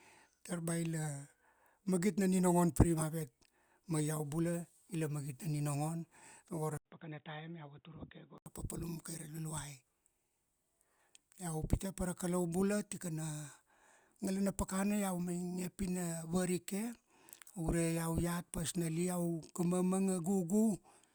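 At 6.77 s the speech goes dull and boxy after a brief gap of about 80 ms, and it stays that way until 8.46 s. The input was likely switched to a poorer device. That device passes nothing above 3.8 kHz, drops the level by around 10 dB, and brings a faint new noise floor. On a spectrogram the upper band is cut off flat across that stretch, and the waveform shows a thin gap followed by smaller peaks.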